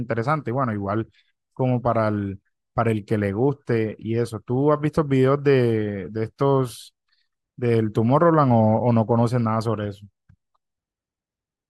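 No technical faults can be heard anywhere in the recording.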